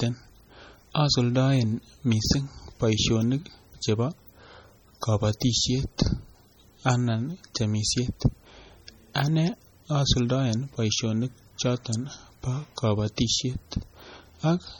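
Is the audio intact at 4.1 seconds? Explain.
No. At 4.1 s the speech carries the heavy MP3 compression damage that runs through the whole clip. The sound is watery and swirly, with metallic chirps on s sounds and smeared onsets, which likely comes from an encoder starved of bits, fitting a low rate around 32 kbps. Weak frequency lines are dropped and return from frame to frame. A spectrogram shows flickering holes in the texture and a flat ceiling with nothing above 19.9 kHz.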